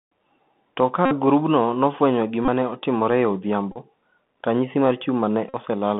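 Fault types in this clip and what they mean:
Bluetooth CVSD headset codec: This is the narrowband headset codec, which sends one bit per sample at 64 kHz to nudge the waveform up or down with a step size that adapts as it goes. Here the speech sits in a telephone-style band of about 150 Hz to 3.5 kHz. The codec damage is plainly audible: a grainy hiss runs under everything, and sharp, loud bits roughen where the step can't keep up.
Bluetooth headset packet repeated: Packets between headset and phone went missing, and the chip just replayed the last good packet's bits. Since each repeat lands every 3.75 ms, you get a short buzz around 267 Hz. It happens four times: 1.05 to 1.14 s, just before "grupno nofwenyo"; 2.45 to 2.48 s, between "ka grupno nofwenyo" and "ne otimore e"; 3.72 to 3.78 s; and 5.49 to 5.55 s, right after "ranyisi mar".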